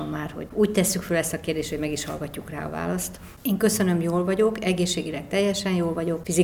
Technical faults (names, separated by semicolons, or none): electrical switching spike